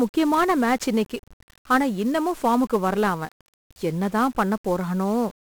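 From start to finish the speech carries heavy 1-bit DFPWM compression damage: one bit per sample nudges an adaptive level, leaving dense broadband noise, fuzzy crackle and treble buried under hiss.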